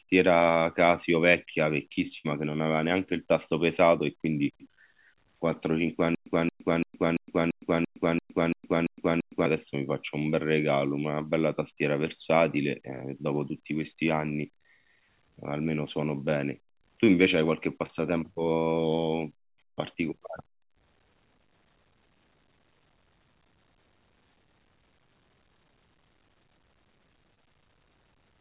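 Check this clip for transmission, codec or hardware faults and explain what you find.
Yes, there are faults in this speech: one burst of packet loss, a long stutter with silent gaps, and two short concealed packet losses. They sit on top of a narrowband call path that tops out at 4 kHz, which fits G.711 A-law.

At 2.18 to 2.26 s there's a burst of packet loss. About 60 ms never arrived, so the receiver stretched the last sound for roughly 64 ms while fading it down. You hear a brief held, dimming tail before the speech jumps ahead with a piece gone.

From 6.15 to 9.46 s you get a stutter with silent gaps. A 225 ms fragment repeats ten times, each followed by about 114 ms of dead silence, giving a steady 340 ms rhythm. It's likely a stalled stream replaying its last buffer on each retry, and the real audio from that stretch is lost.

There are two short concealed packet losses, at 17.86 to 17.91 s and 27.35 to 27.38 s. 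Each time about 20 ms went missing and the decoder filled the hole by continuing the preceding sound, then blended back in. It comes across as a tiny smear or wobble.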